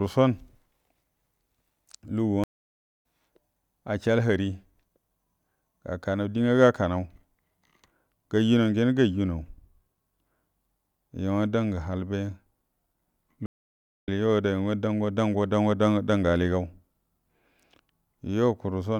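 Stream reconnects at 2.44–3.02 s and 13.46–14.08 s: the connection broke, leaving about 0.58 s of silence. A fresh decoder then resumes roughly 0.7 s and 0.3 s further on, so speech is skipped rather than merely interrupted.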